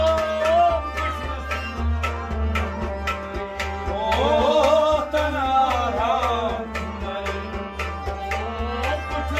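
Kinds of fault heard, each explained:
No faults can be heard anywhere in the clip.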